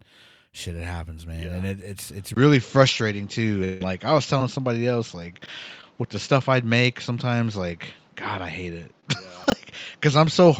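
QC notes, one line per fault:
2.34 s to the end, input switched to a poorer device: there's a gap of about 20 ms, and then the sound goes dull and boxy and stays that way. Nothing above 7.6 kHz survives past that point. The level shifts by roughly 5 dB, and a new background noise floor sits around 35 dB under the signal. This most likely happened because the recording jumped to a different, narrower-band microphone or a headset call profile partway through.
3.64 to 3.81 s, long network dropout: about 160 ms of audio never arrived. The receiver papered over the entire stretch by extending the last sound into a fading buzz. It never falls to true silence before the real audio picks up again, but that section is gone for good. The cause is likely a network stall long enough that concealment had to carry the whole hole.
4.38–4.41 s, 5.81–5.83 s and 9.00–9.03 s, short concealed packet loss: each time, a tiny piece didn't get to the decoder in time. 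The missing stretches are roughly 20 ms, 10 ms and 20 ms. The decoder patched each one by continuing the preceding sound for 13 to 21 ms and then crossfading back into the real audio. You hear it as a quick smear or wobble, and a brief consonant could get swallowed.
5.42–5.48 s and 9.44–9.52 s, chunks out of order: one chunk showed up late and was played after the ones that belonged behind it. The first is two chunks late and the second is three. Each is a 20 ms block, which fits 20 ms packetisation. No audio is lost, but the order is scrambled, so you get a jumbled, garbled moment with three hard joins.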